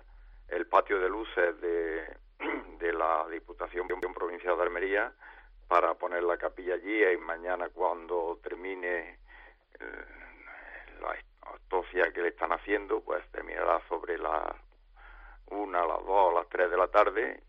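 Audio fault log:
3.89 to 4.14 s, CD stuck on one turn: a 124 ms slice of audio plays twice in a row with a brief mute at each jump, as the laser falls back one track on a scratch. The waveform shows identical repeated blocks separated by tiny gaps; the spectrogram shows matching vertical slices.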